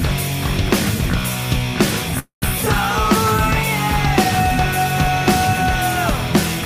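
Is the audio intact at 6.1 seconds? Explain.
No. At 6.09 s a sliver of about 20 ms drops out, and the two sides butt together as a skip. This is likely audio missing between chunks, lost while 2.5 s segments were joined.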